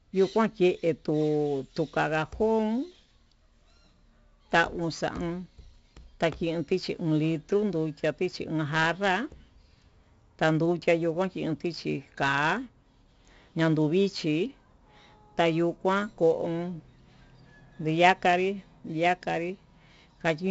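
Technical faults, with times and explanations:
Throughout, 4-bit ADPCM compression: every sample is coded as a coarse 4-bit step from a predicted value, so a gritty hiss rides on the speech and swells and fades with its loudness, and sharp onsets distort where the step size lags behind. The damage is heavy. Nothing reaches above 7.8 kHz, which fits a 16 kHz, 64 kbps stream. A spectrogram shows a hard ceiling near 7.8 kHz and a noise haze tracking each syllable, and the waveform looks stepped at attacks.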